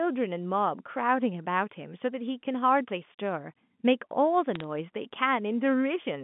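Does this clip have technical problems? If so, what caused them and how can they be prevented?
Yes. Between 4.55 and 4.64 s the speech picks up a short burst of crackle. These are bit errors on a digital phone line. The call is carried as G.711, and its band-limited telephone sound is still audible. A flipped bit alters a single sample. When the hit lands on a sign or high-order bit, that sample jumps and produces a sharp tick. The error rate here is around a third of a percent, so several ticks cluster into crackle. Prevent it by using a cleaner line or adding error detection and concealment on the digital link.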